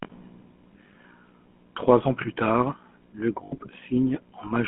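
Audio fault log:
throughout GSM full-rate codec: The speech has a buzzy, gravelly roughness from a coder that models the vocal tract and feeds it a sparse train of regularly spaced pulses instead of the real excitation, and the damage is plainly audible. The roughness fits the 13 kbps full-rate coder. Only a narrow band from about 200 Hz to 3.4 kHz survives. A spectrogram shows nothing above that ceiling and grainy, smeared harmonics. The waveform looks coarse and pulse-like.
3.44–3.57 s lost GSM frames: Right after "ans plus tard le", the sound freezes into a brief rough, metallic ring instead of continuing naturally. The decoder repeated the settings of the last good frame. That fits about 80 ms of missing data, or four 20 ms frames. A spectrogram shows the same harmonic pattern repeated across the gap. The waveform shows a short run of near-identical cycles.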